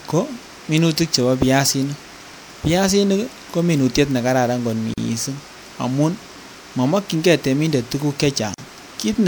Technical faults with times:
4.94-4.98 gap at a join of encoded pieces
8.54-8.58 gap at a join of encoded pieces

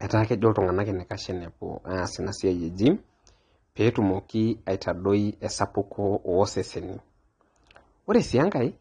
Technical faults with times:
0.00-8.81 AAC compression

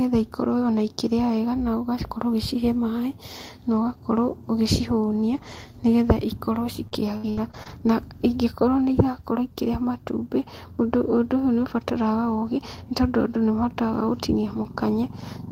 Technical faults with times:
6.87-7.86 repeated packet loss (robotic sound)

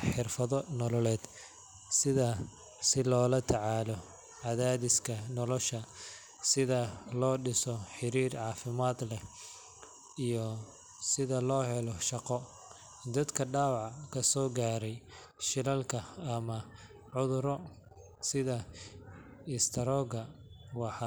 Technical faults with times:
none

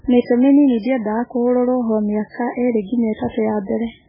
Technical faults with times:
0.00-4.08 MP3 compression
2.29-2.34 pre-echo
3.14-3.19 pre-echo

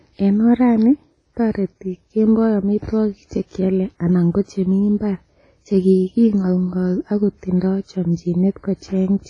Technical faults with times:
0.00-9.29 WMA compression

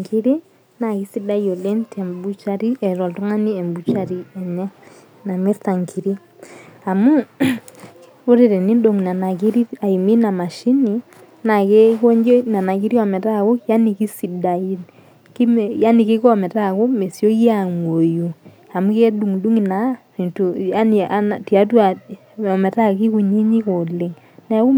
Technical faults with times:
none

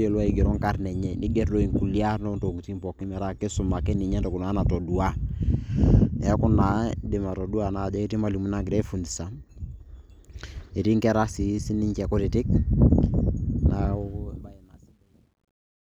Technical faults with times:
13.92-15.93 truncation distortion on a fade

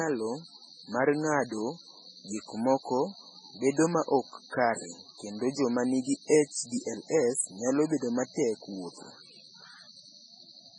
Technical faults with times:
0.00-10.78 MP3 compression

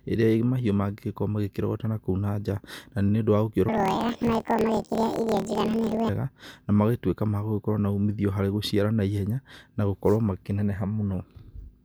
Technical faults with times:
3.69-6.10 planar audio read as interleaved

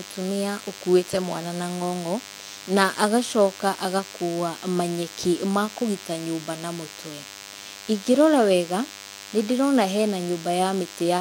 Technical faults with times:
0.00-11.21 DECT cordless phone buzz

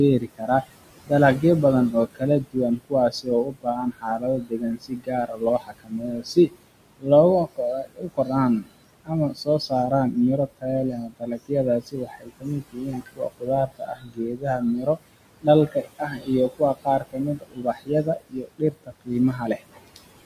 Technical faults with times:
0.00-20.25 noise suppressor artifacts
0.20-0.70 speech cut by the noise suppressor
1.92-6.62 speech cut by the noise suppressor
6.98-7.08 speech cut by the noise suppressor
7.46-8.30 speech cut by the noise suppressor
8.61-10.16 speech cut by the noise suppressor
10.57-15.02 speech cut by the noise suppressor
15.42-19.97 speech cut by the noise suppressor

